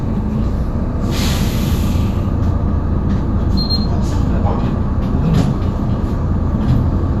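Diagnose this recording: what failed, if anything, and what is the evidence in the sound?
No failure detected here.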